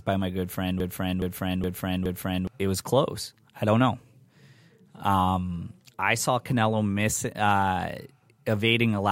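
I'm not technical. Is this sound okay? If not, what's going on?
No, it isn't. From about 0.80 to 2.47 seconds, the speech gets stuck in a broken-record loop. A short piece, about 0.42 seconds long, plays four times in a row, exactly the same each time. This is likely because the playback or stream stalled and kept repeating the last bit it had. Whatever should have been heard in that stretch is missing. After the loop ends, the speech picks up again.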